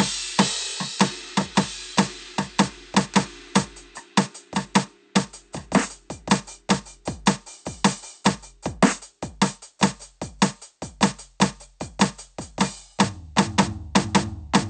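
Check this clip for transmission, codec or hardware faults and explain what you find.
Nothing stood out on listening to this music clip.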